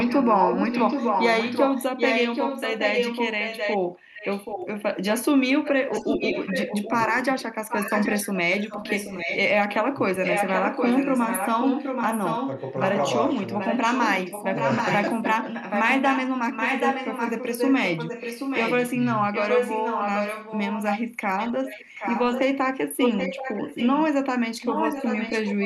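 From the very start to 4.82 s there's an echo leak: a copy of the speech comes back about 0.78 s late, and for that stretch it's roughly as loud as the original. That's most likely a far end on a loudspeaker whose echo canceller didn't fully remove what its mic picked up. It returns a little quieter from 5.64 to 9.39 s, 10.23 to 22.41 s, 22.99 to 24.07 s, and 24.61 s to the end, always at that same 0.78 s lag.

In the middle of that, speech suppressed in double talk shows up, likely the canceller ducking the talker while the echo overlaps. There's a small dip of about 5 dB between 7.07 and 7.13 s. Then from 9.85 to 10.26 s the voice drops hard, by something like 25 dB, for around 300 ms in total.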